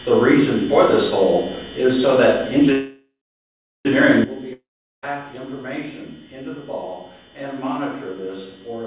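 Heard through a narrowband call path with nothing above 4 kHz, which fits G.711 A-law at 64 kbps, the audio stalls from 2.72 to 3.87 s: the last sound smears into a fading buzz, then about 0.72 s of silence, and it resumes where it left off. This is a call audio freeze, likely from delayed packets draining the jitter buffer, so about 1.13 s of delay is inserted with nothing lost. At 4.24 s the level drops abruptly by about 13 dB and stays down to the end, background noise falling with it. This is a sudden gain jump, likely a digital gain change applied instantly rather than ramped. From 4.53 to 5.04 s a second fading buzz trails into about 0.39 s of silence, and the sound returns further along with roughly 0.5 s missing. This is a long network dropout, likely caused by packets that never arrived, so the receiver concealed the gap and then skipped past the lost stretch.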